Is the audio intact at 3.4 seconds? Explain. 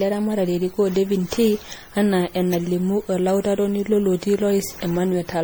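No. At 3.4 seconds, as throughout the clip, the speech has generation loss, likely from around seven rounds of MP3 coding at about 64 kbit/s. It sounds swirly, smeared and hollow, with blurred attacks. A spectrogram shows patchy holes and smeared onsets.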